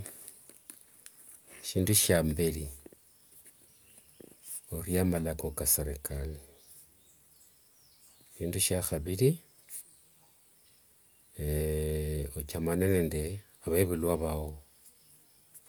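Nothing in this recording stands out as a technical fault: the speech carries on without any glitch, dropout or disturbance catching the ear at any point.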